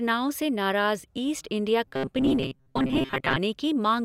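From 1.88 s to 3.37 s, right after "से नाराज़ ईस्ट इंडिया", the speech turns into a rigid, metallic buzz at 133 Hz that only loosely follows the words. This robotic sound from repeated short buffers likely comes from audio arriving too late, so a chunk of about 7.5 ms is replayed in place of the missing audio, roughly half the time. A spectrogram shows evenly spaced horizontal stripes at multiples of 133 Hz, and the waveform shows identical short cycles repeating.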